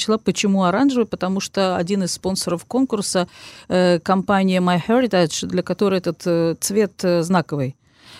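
No technical faults are audible anywhere in this speech recording.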